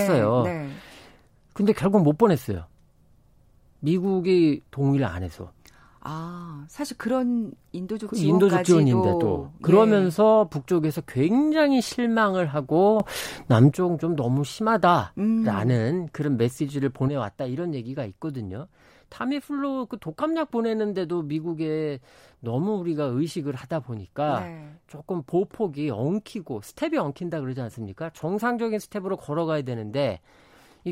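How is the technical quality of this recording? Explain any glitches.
The recording has two level problems, both of the same kind: a sudden gain jump. At 13.0 s the digital gain steps up by about 9 dB with no ramp, most likely a gain setting applied instantly, and drops back at 13.72 s. The speech and the background noise jump louder together, with abrupt edges at both ends. At 17.08 s a second step cuts the level by about 6 dB, and the speech and noise stay quieter through to the end of the clip.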